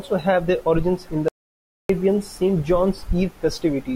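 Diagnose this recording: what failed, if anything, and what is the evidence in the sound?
The speech cuts off abruptly at 1.28 s and goes to silence, with no room tone left, until it resumes mid-flow at 1.89 s. About 0.61 s of material is simply missing. This is an audio dropout to silence, likely at the input stage: the source feeding the recorder was lost, through a disconnected device, a failed link or a mute, while the capture chain kept writing silence.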